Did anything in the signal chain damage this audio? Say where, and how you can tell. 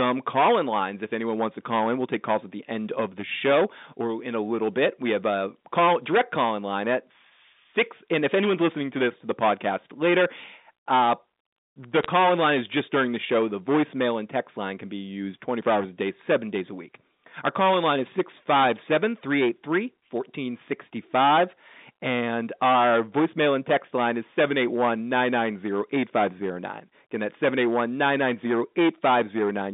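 Yes, two things. The first is hard clipping, present from start to finish, and it sounds like an overdriven stage before the phone line, probably at a converter or gain stage. The drive is about 16 dB too hot, so roughly a tenth of the samples hit the ceiling and get sliced flat. Those flat tops throw off harmonics high up, and that's why every loud syllable carries a harsh fuzz, not just an occasional crackle on peaks.

The second is a short burst of bit errors on the digital phone line, from 12.03 to 12.06 s, just before "in line is just". It's a quick cluster of sharp ticks about 26 ms long. Each flipped bit corrupts a single sample. When the flip lands on a sign or high-order bit, that sample jumps and you hear a click. The speech around the burst stays intact, which points to a low error rate on the network leg. The mu-law telephone coding itself fits a 64 kbps G.711 line, with the band stopping around 3.7 kHz.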